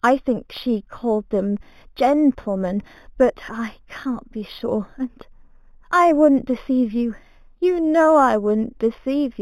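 Imaging from linear upsampling runs throughout the speech. The rate was raised by joining samples with straight lines, which filters poorly. Above a dulled top near 4 kHz, a faint mirrored band from 4 to 8 kHz sits about 30 dB down, pointing to an 8 kHz original and giving sibilants a light metallic shimmer.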